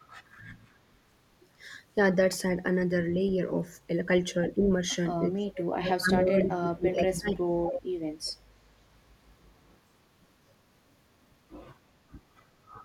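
Short echo leak scraps appear at 3.27, 4.61 and 6.44 s: faint delayed copies of the speech, about 25 to 30 dB below it, trailing by 295 ms. They are likely leftovers that a loudspeaker-side echo canceller failed to remove. The fixed lag separates them from room reverberation, which smears continuously instead of repeating.

From 5.43 to 7.97 s the speech is suppressed in double talk. For about 2 s in total it dips and drops out in pieces, by up to about 30 dB, likely because the canceller treated the overlapping talker as echo. The uneven chopping tracks the other side's talking, unlike a steady level fade.

Later echo leak scraps come at 7.74 and 8.25 s with the delay shifted to 322 ms. The first is strong, only about 10 dB below the speech, and the second is about 30 dB down.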